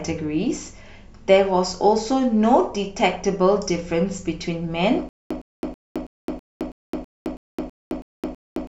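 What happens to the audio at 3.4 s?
Nothing goes wrong at 3.4 s: the speech plays through that point intact, with no dropout, click, glitch or other fault.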